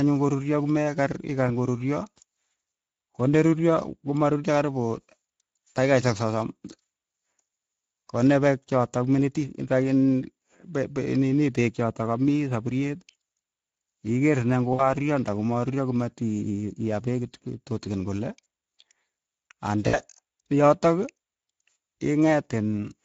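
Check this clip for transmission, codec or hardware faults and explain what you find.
Two faults are audible in the speech: Speex codec damage throughout and two dropouts concealed by the codec.

The Speex codec damage runs through the whole clip and is plainly audible. Speex is a CELP codec. It models the voice with a pitch predictor and a spectral filter, then spends its bits on the excitation signal. This clip runs at around 16.8 kbps. The voice is hoarse and grainy, with a rough, noisy edge.

VoIP packet loss concealed by the speech codec occurs twice, from 14.73 to 14.93 s and from 19.87 to 20.00 s. Each gap holds about 60 ms of missing audio, which fits three 20 ms frames. The decoder filled each gap by repeating its last pitch and filter while lowering the gain. The voice stretches into a short sound that fades. It stays weak and smeared briefly after the packets return.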